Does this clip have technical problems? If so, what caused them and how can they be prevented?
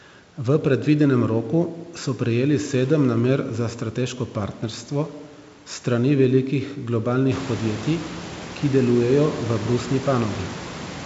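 No, nothing in this speech clip stood out as a technical problem on listening, so there is nothing to trace to a cause or to prevent.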